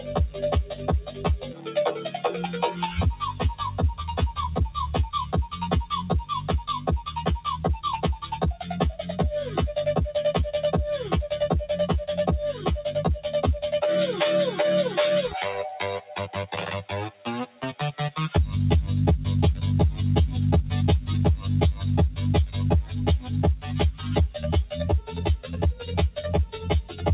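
Throughout, a noise suppressor built for speech is left on, so sustained sound and tails swing by roughly 10 dB. The waveform pumps, and held energy fades unevenly on the spectrogram.

The suppressor cuts sound at 0.70–0.88 s (about 6 dB), 1.05–1.25 s (about 9 dB), 1.42–1.74 s and 1.96–2.21 s (about 10 dB each), then 17.10–17.27 s (about 14 dB) and 17.47–17.63 s (about 13 dB). These show as brief envelope dips and darker spectrogram patches, heard as sudden thinning while onsets survive.

The call path's band stops at 4 kHz, which fits G.711 mu-law at 64 kbps.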